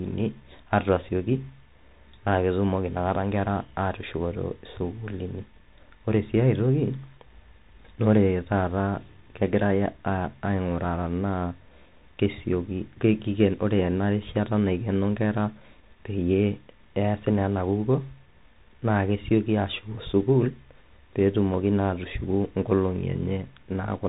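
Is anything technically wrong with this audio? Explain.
Yes. The whole clip has the Bluetooth CVSD headset codec sound: nothing above 3.8 kHz, scratchy s sounds and granular hiss from its one-bit, 64 kbps-style delta coding.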